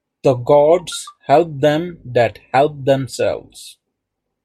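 No technical faults are audible.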